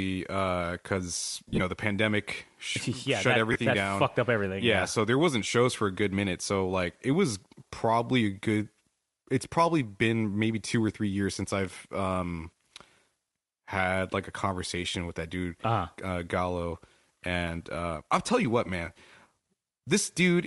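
Across the whole speech clip there is a plainly audible breathy, grainy edge with noise-like treble. That points to Bluetooth LC3 compression, likely at about 48 kbps in 7.5 ms frames. Unlike a muffled, band-limited codec, the upper band is replaced with filled-in noise.

At 1.49 to 1.60 s, between "uh because" and "the pandemic", lost LE Audio frames blur the sound into a noisy smear. About 82 ms goes missing in scattered bursts over 105 ms, the longest run around 40 ms. The decoder repeats the last spectrum with scrambled phase, so the sound smears instead of falling silent. At 3.52 to 3.56 s, after "yeah shut that" and before "that down fucked up", a shorter 30 ms loss leaves the same brief hiss-like smear.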